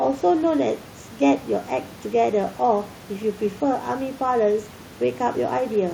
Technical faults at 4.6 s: none

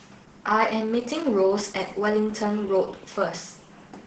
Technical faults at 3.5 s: Opus voice compression

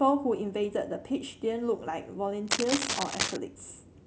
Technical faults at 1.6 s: none

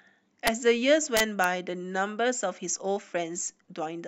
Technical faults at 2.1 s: none

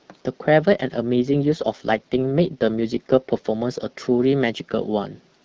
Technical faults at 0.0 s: none

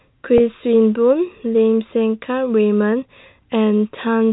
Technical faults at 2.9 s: none

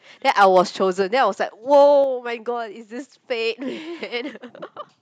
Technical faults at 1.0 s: microphone volume stepped down

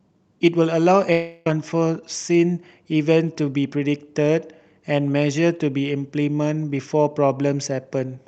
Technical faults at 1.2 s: long network dropout

